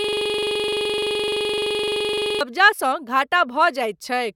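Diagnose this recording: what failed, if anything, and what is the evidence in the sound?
A system hang loop failed at the driver or buffer stage. The recording opens already stuck, and the fault runs to 2.41 s. One 42.67 ms slice of the speech repeats exactly, about 55 times. At 23.4 Hz this sounds like a rough, rapid stutter bordering on a buzz. The slice length fits a 2048-sample buffer. The host or driver froze, and the audio hardware kept replaying the same ring buffer until the system recovered.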